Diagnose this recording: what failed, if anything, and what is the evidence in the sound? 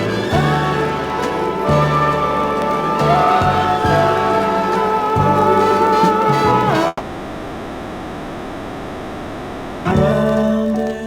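From 6.87 to 9.93 s the sound is continued as a fading buzz and hiss for about 3 s, with only a momentary silence, before audio resumes with roughly 1.6 s of material missing. This is likely a long network dropout: packets stopped arriving and the receiver's concealment filled the gap.

From 10.11 to 11.02 s the audio runs about 14% fast at unchanged pitch and sounds hurried. This is a jitter buffer speed-up at the network receive stage. The buffer had built up extra delay after the dropout, and the receiver is draining it by cutting short pitch-period pieces, about 150 ms in total.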